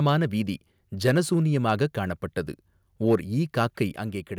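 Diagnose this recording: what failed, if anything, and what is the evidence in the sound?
Harsh, crackling distortion sits on the loudest speech peaks at 1.05 to 1.19 s, 3.11 to 3.16 s and 3.61 to 3.82 s, with flattened tops about 1 to 3 dB past full scale. The stage is the converter: microphone overload, likely from excessive input gain, clips the waveform.

At 3.96 s the speech and background drop together by about 5 dB, right after the last clipped stretch. That one-step fall points to call processing, likely automatic gain control reacting to the overload by stepping the microphone volume down.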